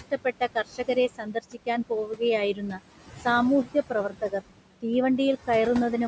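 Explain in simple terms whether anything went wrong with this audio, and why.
A noise suppressor was working hard on the room's background noise throughout, leaving noise suppressor artifacts: the noise dips between phrases.

Speech cut by the noise suppressor happens from 0.11 to 1.68 s, 1.89 to 2.21 s and 2.54 to 2.8 s, where softer bits of speech were mistaken for noise and sound swallowed.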